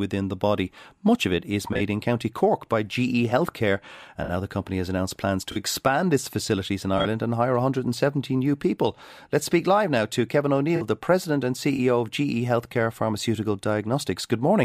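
Six bursts of corrupt frames concealed in this speech: 1.72–1.80 s after "of it is", 4.24–4.30 s, 5.51–5.58 s between "company has announced plans" and "expand its facilities in", 6.97–7.06 s, 10.76–10.82 s before "the president and", and 11.76–11.79 s. Each time the decoder detected damaged AAC data and covered it, over 30 to 85 ms spanning one to three frames.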